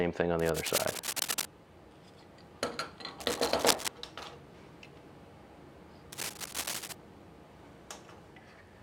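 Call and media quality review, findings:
Dense scratching bursts at 0.39–1.45 s, 3.20–3.88 s, 6.12–6.93 s, level with or louder than the sound: cable scratch noise, likely a worn cable or connector moved, its contact resistance fluctuating.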